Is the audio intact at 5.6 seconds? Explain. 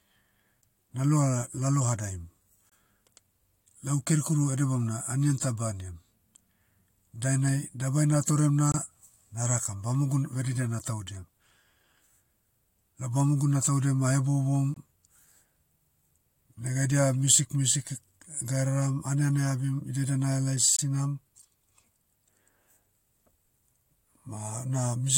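Yes, the audio is intact at 5.6 seconds, with no dropout, click, distortion or other fault at that moment.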